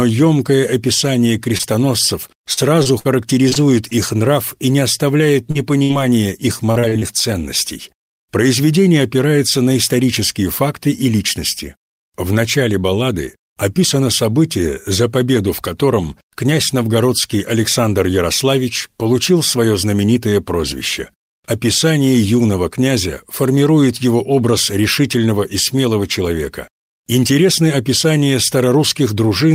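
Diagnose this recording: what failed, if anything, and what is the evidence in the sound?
Network, short concealed packet loss: 20 ms holes at 1.57 and 1.61 s and a 40 ms hole at 5.51 s were patched by extending the previous sound, leaving brief smears.

Network, repeated packet loss (robotic sound): six gaps between 2.53 and 3.93 s and four between 6.71 and 7.03 s, concealed in turn, make the sound choppy, with pieces missing.

Network, burst of packet loss: about 60 ms went missing at 5.83 to 5.91 s. Concealment continued and faded the last sound before playback resumed further on.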